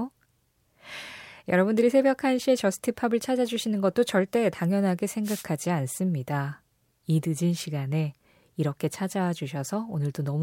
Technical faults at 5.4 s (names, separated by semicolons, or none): wireless microphone noise hit